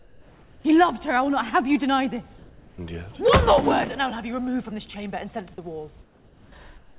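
At 0.00–0.64 s, 2.38–2.78 s, 6.02–6.52 s and 6.78 s to the end, the quiet background becomes steady, featureless hiss about 1, 2, 2 and 5 dB quieter. This is comfort noise in place of the background, likely from discontinuous transmission. Unlike a dropout, the pause never goes silent. The noise stays band-limited like the rest of the audio, with nothing above 4 kHz.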